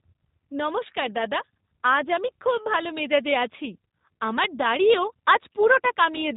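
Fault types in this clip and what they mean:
G.729 codec: The speech is rebuilt from a modelled vocal tract and a few pulses per short frame rather than carried as a waveform, so it sounds rough and slightly synthetic throughout, with plainly audible damage and nothing above 4 kHz. Unlike a simple low-pass filter, which only dulls the sound, it adds a buzzy, artificial texture to the speech itself, which fits an 8 kbit/s G.729A stream.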